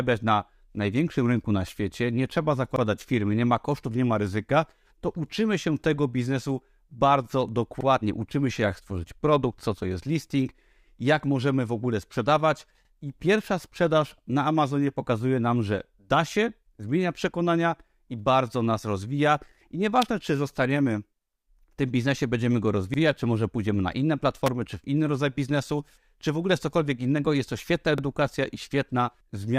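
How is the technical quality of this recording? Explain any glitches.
The recording has two kinds of glitch: a regular stutter from overlapping chunks, and two brief snaps from an electrical switching spike.

Overlapping chunks occur at 2.76, 7.81, 12.85, 17.90, 22.94 and 27.98 s. The audio was handled in 5-second blocks. Each block began 44 ms before the previous one ended. That sliver of speech plays twice at every join. You hear a small click or stutter every five seconds.

An electrical switching spike appears at 20.02 s and again at 24.46 s. Each is a sharp, very short snap laid over the speech. The likely cause is a nearby switch, motor or static discharge arcing and coupling into the audio line.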